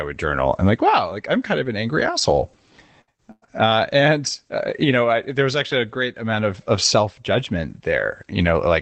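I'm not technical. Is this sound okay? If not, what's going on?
No, there are a couple of rough moments, all packed into about a second. First, a burst of packet loss at 3.01 to 3.10 s and again at 3.31 to 3.45 s: chunks of speech never arrived, so the call stretched the last sound into a fading buzz or hiss, the second time with a brief silence, then jumped ahead past the missing bit. Then there are lost packets rebuilt from error correction at 3.42 to 3.48 s, 3.66 to 3.68 s and 3.68 to 3.73 s. Backup copies filled those spots without gaps, but they sound rougher and noisier.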